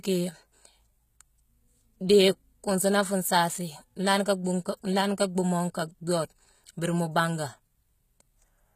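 Speech with plainly audible HE-AAC compression throughout: sibilants sound gritty and metallic, likely from spectral band replication at a low bitrate near 20 kbps. A spectrogram would show blocky, copied-looking treble bands with misaligned harmonics and nothing above 14.9 kHz.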